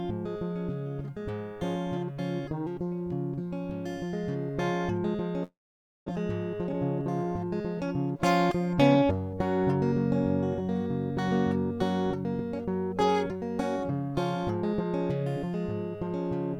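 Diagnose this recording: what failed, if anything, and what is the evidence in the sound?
From 5.43 to 6.10 s the music decays into a fading buzz, then silence, and returns with about 400 ms missing. This is a long network dropout, likely lost packets. Unlike a local underrun, playback skips ahead rather than resuming where it stopped.

From 6.18 to 9.03 s the music runs about 8% fast at unchanged pitch, so the tempo drifts. This is a jitter buffer speed-up: the receiver cut short pitch-period slices, roughly 200 ms in all, to shed built-up delay. A clock or resampling error would raise pitch as well.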